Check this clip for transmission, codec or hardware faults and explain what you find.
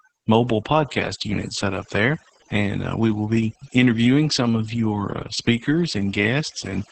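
Two faults run through the whole speech recording: overdone noise removal and Opus voice compression.

Overdone noise removal affects every second. A noise reducer set too aggressively has pulled individual frequency bands to near zero wherever they resembled its noise estimate, taking soft parts of the speech with them. The pauses fall to near silence scattered with twinkling specks. On a spectrogram the background shows as isolated flickering dots on a dark field.

Opus voice compression also covers the entire clip, with heavy damage from its linear-prediction SILK mode working at a low rate, which fits roughly 10 kbps in 20 ms frames. The speech sounds muffled, hoarse and faintly robotic. A spectrogram shows a hard ceiling with nothing above 8.5 kHz and smeared, coarse harmonics below it.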